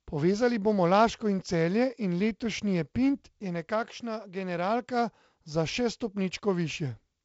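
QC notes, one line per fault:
Nothing stood out on listening to this speech clip, which carries the band-limited sound of a G.722 wideband telephone link.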